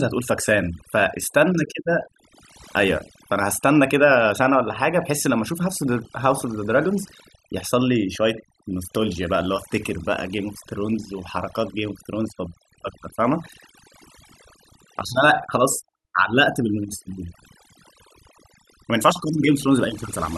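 From start to finish the speech carries overdone noise removal: a noise reducer pushed too hard gates individual frequency bands near the noise floor, taking quiet vocal detail with them. The background falls to near silence with twinkling specks, and a spectrogram shows scattered isolated dots between patchy, hollowed-out speech harmonics.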